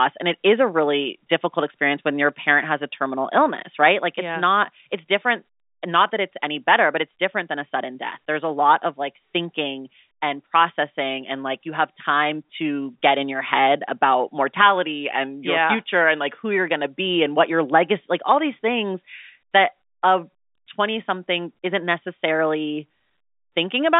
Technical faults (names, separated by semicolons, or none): none